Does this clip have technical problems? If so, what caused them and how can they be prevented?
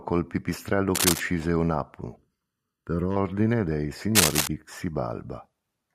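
Yes. Cable scratch noise appears from 0.95 to 1.20 s, just after "col pipistrello", and again from 4.15 to 4.48 s. It is rough rustling about as loud as the speech, and somewhat louder the second time. It is likely caused by a worn connector or cable whose contact resistance flickers as it moves. A waveform shows jagged, irregular bursts, and a spectrogram shows ragged broadband vertical streaks. Replacing or securing worn cables and connectors prevents this.

Channel delay (comb filtering) makes the speech hollow and phasey from 2.16 to 3.16 s. One channel lags by under a millisecond, and summing to mono cancels shared content from about 700 Hz upward at regular intervals. A spectrogram shows evenly spaced dark horizontal bands. Checking channel alignment before any mono fold-down prevents it.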